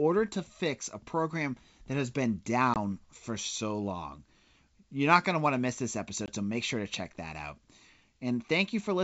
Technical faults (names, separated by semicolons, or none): packet loss on an ADPCM call